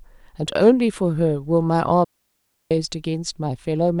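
A speech recording that falls into a clean hole of near silence from 2.04 to 2.71 s, about 0.67 s long, with no crackle or noise burst either side. That is a digital wireless dropout: the receiver lost too much data and muted with a very fast fade.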